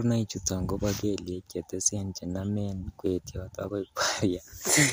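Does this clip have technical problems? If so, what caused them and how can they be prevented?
Yes. At 3.55 s, just after "chenomen kwetiot", a single sharp click comes from dropped samples. A handful of samples, well under a millisecond, go missing, so the waveform jumps abruptly to a later value. The waveform shows a sudden step, and the spectrogram shows a thin vertical line across all frequencies. The likely cause is a brief glitch or underrun in the capture or playback buffer. Larger buffers and uninterrupted processing in the audio path prevent it.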